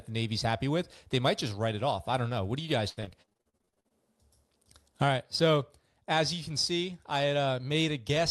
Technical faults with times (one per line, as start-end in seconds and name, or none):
2.89-3.92 repeated packet loss (robotic sound)